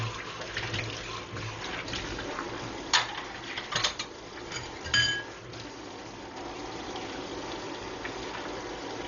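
From start to end the audio is dull and band-limited, with nothing above 7.1 kHz, and tones carry a rough, fluttering noise. This is heavy Dolby Digital compression, likely at a very low bitrate around 40 kbps, where starved frequency lines are refilled with dither. A spectrogram shows a hard ceiling and speckled noise.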